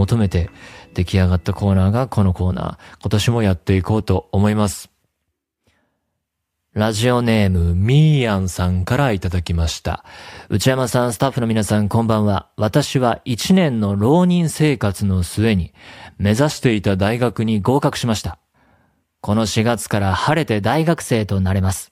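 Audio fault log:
3.32–5.01 s, 7.57–9.91 s, 16.50–17.48 s: drift correction steps. The speech suddenly slows by 6.16% and drops 110 cents, just over a semitone, then snaps back. Speed and pitch move together. The likely cause is clock-matching software resampling in one step to refill its buffer.
20.72–21.91 s: drift correction step. The speech now runs 6.16% fast and 104 cents sharp until the clip ends. This is likely the opposite step, draining the buffer.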